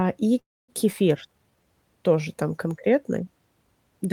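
At 0.39 s the speech stops and a call audio freeze sets in, lasting until 0.70 s. The last sound carries on for a moment as a short fading buzz. Then about 250 ms of silence follows. When the audio returns it resumes where it left off. Nothing seems lost, but a 290 ms hole has been inserted. The likely cause is delayed packets draining the jitter buffer, leaving the receiver nothing new to play.

A skip ahead follows at 0.92 to 0.95 s. Playback jumps forward with almost no gap, only a few milliseconds of fill. Roughly 70 ms of speech is gone. That is a fragment of a syllable, not whole words. The two sides of the cut are butted straight together. Audio was dropped while later packets were already queued, and playback moved straight on to them.

From 1.28 to 1.64 s comes a jitter buffer slow-down, ending just before "тоже там конкретный". The speech drags to about 79 percent of normal speed. 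The pitch stays the same. Sounds are stretched, and there may be a faint warble. The buffer was running short or had just raised its target delay, so the receiver repeated single pitch periods over and over. That added 86 ms to build a reserve against further late packets.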